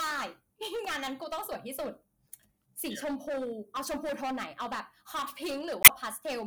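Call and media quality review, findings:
Harsh fuzz on every loud syllable, whole clip: hard clipping. Level about 20 dB over the ceiling of a gain or converter stage, peaks squared off on roughly a sixth of samples.

Glitch, 5.82 to 5.90 s: damaged data in a compressed stream. Corrupt frames misread, decoder lost sync and resumed at the next frame header.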